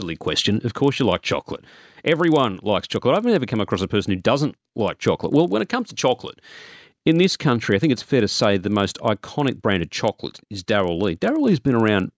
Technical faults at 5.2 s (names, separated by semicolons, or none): resampler restarted on every block